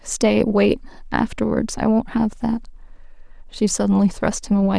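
No technical faults can be heard anywhere in the speech recording.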